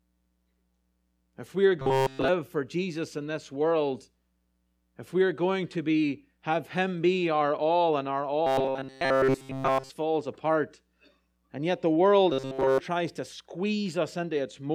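From 1.78 to 2.28 s, 8.47 to 9.90 s and 12.32 to 12.80 s the speech collapses into a rigid metallic buzz at 133 Hz. This is robotic sound from repeated short buffers, likely caused by audio arriving too seldom. A roughly 7.5 ms slice is looped throughout while fresh audio is skipped. Unlike a dropout, the sound never goes silent.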